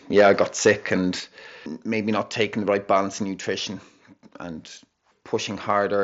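From 0.17 to 0.94 s there is microphone overload: peaks run about 7 dB past the converter's ceiling, so a small share of samples have their tops flattened. The loudest syllables take on a harsh, crackly edge, likely from the input gain being set too high.

The microphone volume steps down four times, each a sudden drop in both voice and background level: about 2 dB at 0.21 s, during the distorted stretch, and about 5 dB at 1.2 s. A smaller drop of about 1 dB comes at 2.22 s, just before "taking the right balance", and one of about 2 dB at 3.24 s, right after that phrase and before "nutrition and". The pattern likely reflects call software automatically cutting the device's input gain after it registered clipping. The mSBC headset link leaves nothing above about 7.7 kHz across the clip.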